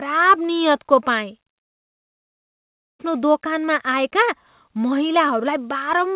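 Speech over a call path, band-limited at 4 kHz in a way that fits G.711 mu-law. From 1.62 to 3.01 s the sound collapses into a brief fading buzz, then near-silence, before resuming at "दोकानमा आएका" with about 1.4 s missing, likely a long network dropout.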